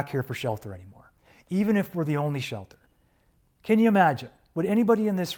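Speech carries clock drift between sender and receiver. The sending clock runs roughly five percent fast, so the receiver's jitter buffer keeps overfilling and must discard audio to stay in step. On a waveform this leaves tiny, unevenly spaced seams where the trace jumps abruptly. These repeated timing corrections run from 0.31 s to 5.14 s. Each trims a short piece, making the sound play at 105% speed and heard as slight hiccups and a faintly rushed, unsteady tempo. A spectrogram shows narrow vertical breaks where harmonic lines cut off and resume.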